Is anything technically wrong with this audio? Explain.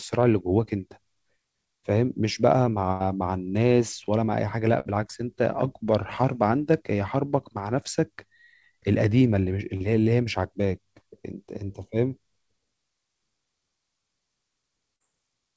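Yes. The speech, which stops at 8 kHz in a way that fits a G.722 call codec at 64 kbps, has four packet-loss events.

Burst of packet loss at 2.92–3.03 s and 4.80–4.92 s: several packets in a row were lost or arrived too late, so the receiver stretched the last sound for 81 ms and then 52 ms, fading it into a held buzz or hiss. The speech then resumes further on, with 80 ms and 40 ms missing. The audible skip forward is what separates these from the shorter concealment events.

Short concealed packet loss at 9.76–9.83 s and 14.96–15.03 s: about 40 ms of audio never reached the decoder in each case. The receiver filled the gap by continuing the preceding sound and then blended back into the real signal. This is heard as a quick smear or wobble rather than a sustained fading tone followed by a jump.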